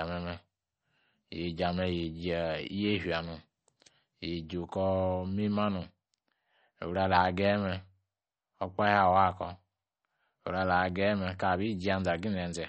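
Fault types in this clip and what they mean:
MP3 compression: speech stops dead at 8.5 kHz and sounds plainly watery and swirly, likely from MP3 encoding at a low bitrate near 36 kbps.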